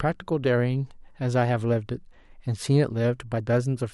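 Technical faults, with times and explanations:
No technical faults heard.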